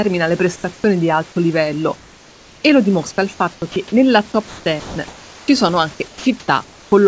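From 0.56 to 0.84 s, comfort noise replaces the room background. The real noise gives way to a smooth, featureless hiss. The likely cause is the sender's voice detector pausing transmission while the receiver synthesises a stand-in.

Inside that stretch, at 0.74 to 0.84 s, the voice detector drops sound. About 40 ms of speech vanishes into the steady fill. The detector likely misread a quiet edge as background.

From 1.96 to 2.64 s, comfort noise returns. The background drops about 3 dB and loses its texture. At 3.54 to 3.62 s, a brief patch falls about 4 dB.

From 4.48 to 5.48 s and 6.08 to 6.92 s, the voice detector chops the sound. It likely toggled repeatedly. Speech fragments give way to synthetic fill. The band stops at 8 kHz, which fits G.722 at 64 kbps.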